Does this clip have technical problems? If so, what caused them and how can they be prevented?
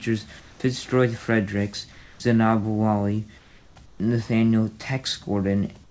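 Yes. Comfort noise in place of the background appears in four speech pauses: 0.40–0.60 s, 1.92–2.20 s, 3.38–3.76 s and 3.86–4.00 s. The quiet background, about 27 to 30 dB below the loudest speech, becomes a steady, featureless hiss that is about 2 to 5 dB quieter. This is likely caused by discontinuous transmission: the sender stopped sending audio in the pauses, and the receiver filled each gap with synthetic noise. On a spectrogram, each gap shows as a smooth, uniform band with the background's fine texture missing. The waveform shows a slight step in level at each edge. To prevent this, disable discontinuous transmission (DTX) on the sending side, or raise the voice detector's sensitivity so that background passages are still transmitted. The spectrum stops at 8 kHz, which fits a wideband call codec.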